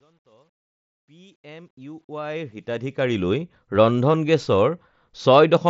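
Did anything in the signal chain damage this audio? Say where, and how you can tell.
Yes. The damage is truncation distortion on a fade, introduced at a gain or sample-format stage. The speech fades in from 0 to 3.42 s, and that rise sounds gritty instead of clean. It is worst from 0 to 1.67 s, at the quiet start. The fade was computed without dither and stored with too few bits, which fits an 11-bit word. Low levels collapse into coarse square steps. The band stops near 7.7 kHz, which matches an mSBC headset link.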